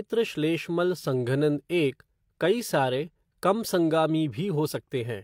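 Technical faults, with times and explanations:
No technical faults detected in the speech.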